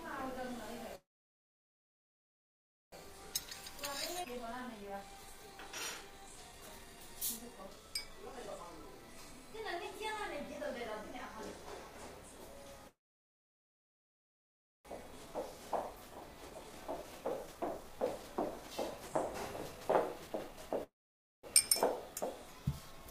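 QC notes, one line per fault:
0.95–2.95 s, call audio freeze: the last sound carries on briefly, then about 1.9 s of silence before the audio resumes where it stopped, likely packets held up and the jitter buffer running empty.
3.05–11.75 s, jitter buffer speed-up: the receiver trims small pitch-period slices to shed the built-up delay. Around 1.5 s is cut, so it runs at 115% and sounds hurried at the same pitch.
4.23–4.27 s, skip ahead: roughly 0.7 s of audio is dropped and playback jumps straight forward, with the two sides joined almost directly and barely any gap.
12.87–14.88 s, call audio freeze: the same pattern again, with the last sound holding briefly, then about 1.9 s of silence before playback continues with nothing lost.
14.97–20.70 s, jitter buffer speed-up: catching up once more, it removes about 1 s in short pieces, so the audio plays at 116% and sounds rushed without any pitch change.
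20.83–21.46 s, call audio freeze: a shorter stall, with a brief hold of the last sound and then about 0.53 s of silence, which pushes everything after it later.
22.52–23.07 s, jitter buffer speed-up: only about 70 ms is trimmed, and this short stretch runs at 111%, sounding hurried at unchanged pitch.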